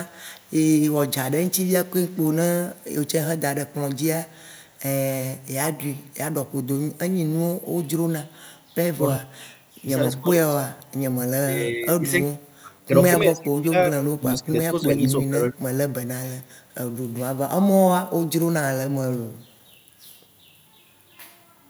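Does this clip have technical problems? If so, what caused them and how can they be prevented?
Yes. There is faint echo leak at 0.06–0.54, 1.09–3.08, 4.28–4.79, 16.43–16.74 and 19.33–19.58 s: a copy of the speech trailing 306 ms behind, roughly 35–40 dB down. The cause is likely a far-end loudspeaker echo the canceller didn't fully remove. Unlike room reverb, it's a discrete repeat at a fixed delay. Better echo cancellation or a headset prevents it.

Speech is suppressed in double talk at 9.2–10.27 s and 11.44–15.73 s. The voice drops by up to about 25 dB in pieces, briefly in the first span and for about three seconds in the second. An echo canceller likely confused overlapping talk with echo. Unlike dropouts from packet loss, the gaps follow the overlap. Tuning the canceller's double-talk detection prevents it.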